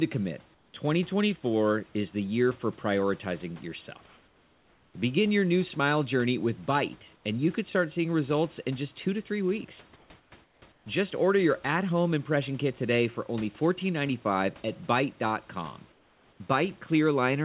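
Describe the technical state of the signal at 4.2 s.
At 4.2 s, comfort noise in place of the background fills 4.06–4.94 s after "the year for prioritizing": a steady, featureless hiss about 3 dB quieter, likely discontinuous transmission. The spectrogram shows a smooth, texture-free band below 4 kHz.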